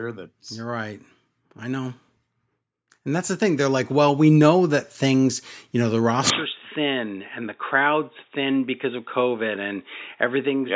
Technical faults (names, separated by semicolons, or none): automatic gain rising